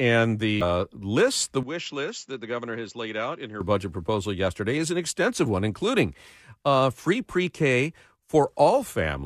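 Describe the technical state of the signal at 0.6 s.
A short, harsh blip cuts into the speech at 0.61 s, just before "list the". It is damaged data in the compressed stream: the decoder hit corrupted bytes, misread the frame there, lost sync and resumed at the next valid frame header.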